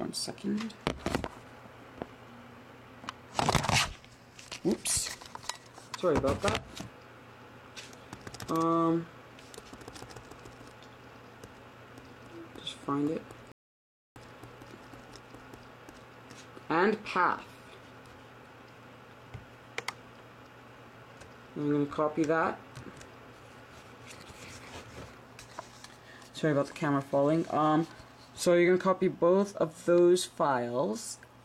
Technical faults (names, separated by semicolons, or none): rebuffering stall